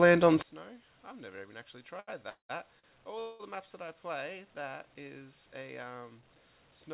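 From 0.42 s to the end, one stereo channel has likely been inverted in polarity, so the shared content cancels in mono and the level drops by about 23 dB, leaving a faint residue. Between 2.0 s and 3.41 s come repeated stalls (stutter). Packets arrived late and the jitter buffer ran dry four times, so the receiver stretched the last sound for gaps of up to 199 ms. That adds roughly half a second of filler without losing anything, and the passage drags and stumbles over a band that stops at 4 kHz.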